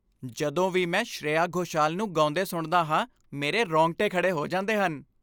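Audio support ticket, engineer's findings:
Nothing stood out on listening to the speech recording; no findings to log.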